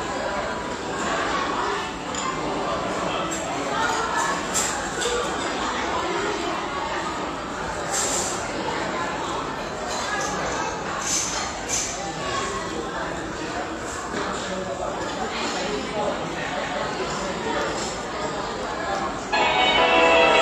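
Repeated frames at 2.51 s and 16.58 s: blocks of about 93 ms and 186 ms replay once, causing a brief stutter and lengthening the audio.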